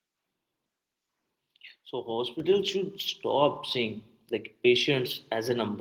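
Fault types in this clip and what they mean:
Microphone volume stepped up: the call software judged the microphone input too quiet and raised the device's input volume in a single step rather than easing it up gradually. At about 2.4 s the whole signal jumps up by about 4 dB at once, and the speech and the background noise grow louder together.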